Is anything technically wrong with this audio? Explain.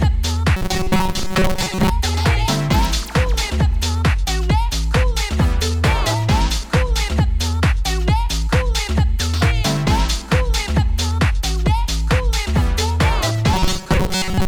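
Yes. From 0.57 to 1.90 s and 13.54 to 14.48 s there is robotic sound from repeated short buffers, a rigid 188 Hz buzz, likely from repeating roughly 5 ms chunks in place of most of the missing audio. On a spectrogram this shows as evenly spaced harmonic lines, and in the waveform as identical repeating cycles.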